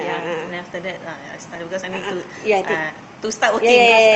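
A speech recording, heard through a call path whose Opus coding cuts off the top end around 8 kHz. At 1.55 s the talker jumps abruptly forward, with no silence or fill at the join. Roughly 0.4 s of speech simply isn't there. This is a skip ahead: the receiver discarded a stretch of audio, in transit or when the jitter buffer overflowed, while later audio was already queued, so playback rejoined nearly seamlessly and the delay shrank by about that amount. Right after, from 1.65 s to 3.79 s, the speech runs noticeably hurried, about 106% of normal speed, yet the pitch stays where it was. That is jitter buffer speed-up: with more audio buffered than its target, the receiver trimmed many tiny pitch-period-length slices in succession, around 150 ms in total, to pull the latency back down.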